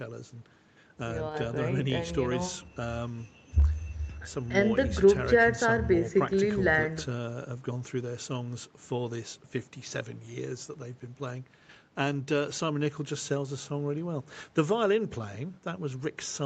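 Nothing in this speech recording stands out as a technical fault. It has the sound of a call path, with the highs ending at about 8 kHz, which fits the usual band limit of a call microphone chain and an Opus-coded WebRTC connection.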